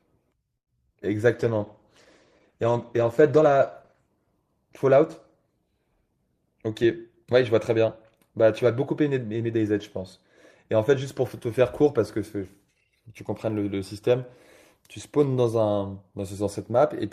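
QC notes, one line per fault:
0.57 to 0.69 s, short stall from a late packet: a packet arrived late and the jitter buffer ran dry, so the receiver held the last sound for 96 ms, then resumed where it left off. Nothing is lost, but the speech stretches audibly and shifts delay by 96 ms.
0.95 to 0.97 s, short concealed packet loss: about 20 ms of audio never reached the decoder, and the receiver patched the gap by extending the preceding sound before blending back in. The result is a brief smear or wobble in the speech.
1.35 to 4.08 s, call bitrate drop: the bandwidth estimate fell and the encoder was pushed from 32 to 13 kbps, staying at the lowest rate for about 2.7 s. Coarser coding makes the speech rough and watery, with duller highs until the rate recovers.
6.46 to 7.34 s, jitter buffer speed-up: the buffer was holding too much audio, so the receiver repeatedly trimmed short pitch-period pieces, removing roughly 70 ms in total. 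Speech runs about 6 percent faster at unchanged pitch and sounds hurried.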